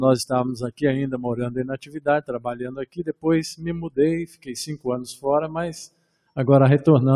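A noise suppressor designed for speech has been left active on this audio for its whole length, and it treats sustained, steady content as noise to be removed. The level therefore rises and falls by around 15 dB as the processor's gain moves. Sharp onsets pass largely intact, while held tones and ambient tails are pulled down, giving the sound a pumping, fluttering and thinned quality rather than a stable one.

Five specific spans show the noise suppressor cutting the sound harder than elsewhere. From 1.73 to 2.04 s the level drops by about 15 dB. From 2.61 to 3.25 s the deepest cut reaches about 16 dB. Further drops of about 15 dB follow at 4.29 to 4.51 s, 4.70 to 4.86 s and 5.88 to 6.37 s. In each span the steady or decaying material sinks or has its tail truncated.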